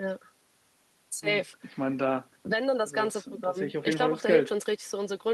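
Speech recording, with nothing technically wrong with it.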